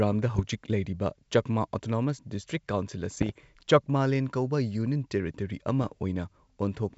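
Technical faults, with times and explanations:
0.34–0.45 s, 3.12–3.32 s and 5.83–5.93 s: bit errors on an ADPCM link. A small fraction of flipped bits knocks the decoder's step size and predictor off track, so each error rings on as pops, rough bursts and brief level jumps. The waveform shows jagged spikes; the spectrogram shows short broadband vertical smears.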